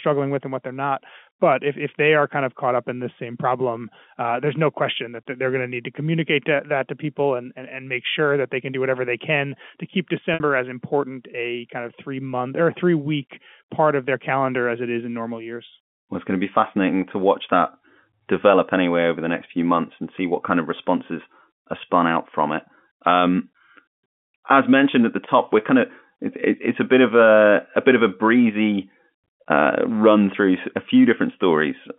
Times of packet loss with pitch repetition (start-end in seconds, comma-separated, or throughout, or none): 10.34-10.40